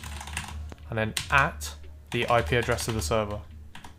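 A single loud pop sits on the audio from 0.72 to 0.76 s, a sharp transient peaking around 5 dB above the surrounding level while the sound continues underneath. It is likely a voltage step or spike, such as a switch, plug or static discharge, entering the signal chain.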